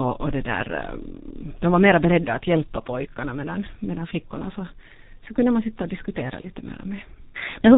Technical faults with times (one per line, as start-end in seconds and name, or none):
0.00-7.78 G.723.1 codec
6.41-6.47 VoIP packet loss concealed by the speech codec